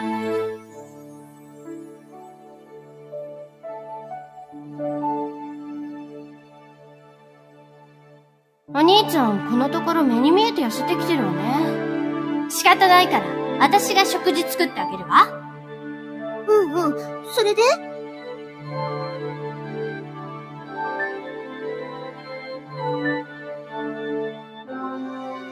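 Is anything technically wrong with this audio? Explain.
Yes. A noise suppressor meant for speech has been left on for the whole clip. It treats steady, sustained parts of the sound as noise and pulls them down, while attacks pass. The level swings by around 10 dB, so the sound pumps and thins.

The sound is cut by the noise suppressor at 0.59 to 3.64 s, 6.37 to 8.68 s, 15.45 to 16.24 s, 18.07 to 18.63 s, 20.04 to 20.72 s, 22.12 to 22.71 s, 23.27 to 23.72 s, and 24.32 s to the end. Held parts sink by about 6 dB, about 4 dB at 23.27 s, and their tails shorten.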